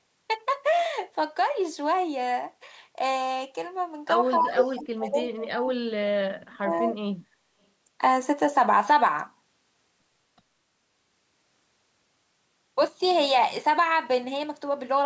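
Speech that dips by about 10 dB at 4.36–4.56 s, then breaks up in pieces, dropping by up to about 35 dB, from 4.74 to 6.06 s and from 6.52 to 7.39 s. This is likely speech suppressed in double talk, with the echo canceller turning the talker down while the far side spoke over them. Between 4.41 and 4.78 s, a second copy of the voice arrives 256 ms late at roughly the same loudness, likely an echo leak from a loudspeaker whose echo the canceller failed to remove.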